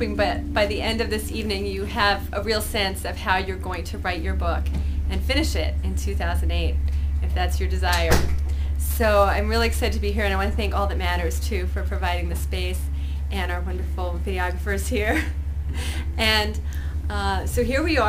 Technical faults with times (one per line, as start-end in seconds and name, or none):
8.90-16.90 sample clock jitter